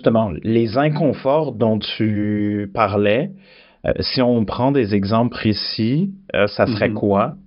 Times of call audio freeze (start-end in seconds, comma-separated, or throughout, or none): none